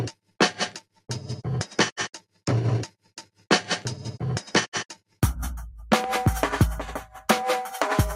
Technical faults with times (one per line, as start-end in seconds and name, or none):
0.00-8.15 noise suppressor applied to music or sounds
0.12-0.36 sound cut by the noise suppressor
0.78-1.10 sound cut by the noise suppressor
2.15-2.43 sound cut by the noise suppressor
2.89-3.47 sound cut by the noise suppressor
4.92-5.20 sound cut by the noise suppressor
6.04-6.18 loud pop